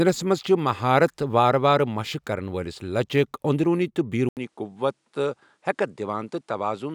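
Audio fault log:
4.29–6.95 s, input switched to a poorer device: after an 80 ms silence, the speech drops by roughly 5 dB, loses everything above 11.4 kHz and gains a faint new noise floor, likely because capture moved to a narrower-band microphone.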